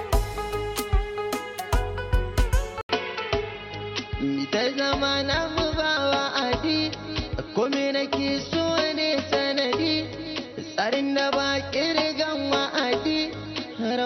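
At 2.81 s the recording likely moves to a poorer input, a change of device partway through capture. An 80 ms gap of silence marks the switch, and from there to the end the band is cut off at 5.9 kHz, so the sound turns duller and boxier with a different tone. A new background noise sits roughly 30 dB below the signal, while the overall level stays much the same across the change.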